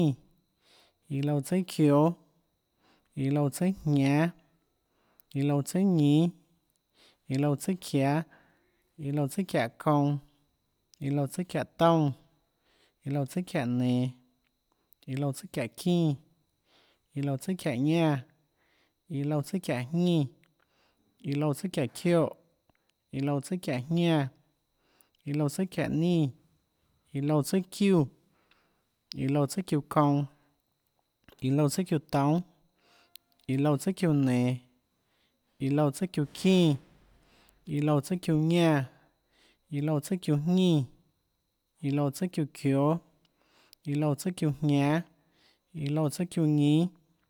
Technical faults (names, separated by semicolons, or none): none